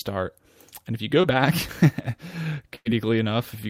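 Short concealed packet loss at 1.21 to 1.25 s, just after "if you": about 20 ms of the speech never arrived in time, so the receiver extended the preceding sound to bridge the hole and blended back in, leaving a brief smear in place of the missing audio.

A burst of packet loss follows at 2.75 to 2.87 s, where about 100 ms went missing in a row. The receiver carried the last sound forward and let it fade across the gap, heard as a short held, dying sound before the speech resumes further along, the part in between lost.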